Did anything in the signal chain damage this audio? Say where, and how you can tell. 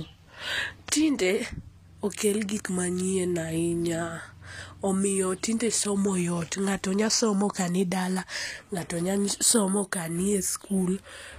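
Yes: HE-AAC compression runs throughout the clip, at the codec stage, with plainly audible damage. The treble sounds synthetic, and s sounds come out gritty and metallic, which fits a low bitrate around 24 kbps. The likely cause is spectral band replication. Only the lower spectrum is truly coded, and the upper bands are patched in from copies shaped by a coarse envelope, so the harmonics fail to line up. Nothing reaches above 14.9 kHz.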